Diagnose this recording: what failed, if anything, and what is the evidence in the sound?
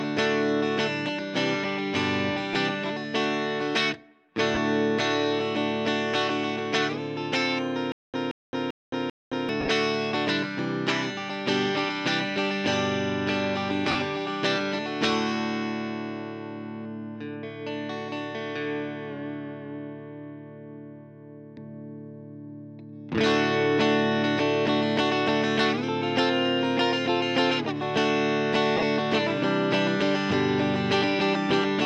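Lost LE Audio frames at 2.53–2.55 s, 4.55–4.57 s, 9.60–9.68 s, 13.91–13.95 s and 28.77–28.83 s: brief noisy smears of 15 to 52.5 ms in the Bluetooth codec link, where the LC3 decoder refilled missing frames with the previous spectrum and randomised signs. The gaps fit 7.5 ms frames.

Stutter with silent gaps from 7.92 to 9.49 s, at the playback or buffer stage: a 176 ms fragment repeats four times, each followed by about 217 ms of digital silence, giving a steady 392 ms cycle. This likely comes from a stalled stream replaying its last fragment at each retry before running dry.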